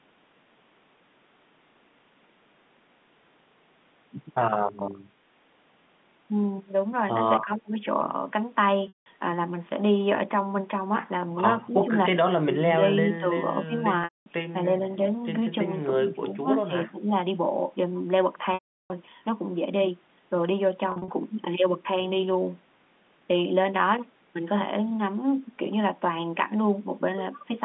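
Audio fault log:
7.44 to 17.12 s, speech suppressed in double talk: the talker's level dips in short bites at 7.44–7.8, 11.68–11.94, 12.41–12.8, 13.05–13.26, 13.65–13.72, 16.2–16.39 and 16.68–17.12 s, sometimes nearly gone (around 30 dB down at 7.44 s, around 25 dB at 12.41 s), elsewhere only pulled back by roughly 10 to 15 dB. Each bite lasts from under a tenth to about a third of a second. The likely cause is an echo canceller that, with both ends talking, mistook this side's voice for loudspeaker echo and attenuated it.
8.88 to 21.08 s, packet loss with pitch repetition: at 8.88–9.06, 14.04–14.26 and 18.54–18.9 s the voice freezes into a held, buzzy tone that then fades to silence before speech cross-fades back. The gaps are 180, 220 and 360 ms, the last long enough to leave a clear hole. At 20.92–21.08 s, 120 ms was lost in scattered bits no longer than 40 ms across 160 ms, giving a brief, slightly held, buzzy patch. 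The receiver is repeating the last pitch cycle to bridge missing packets and tapering it off when the gap runs long.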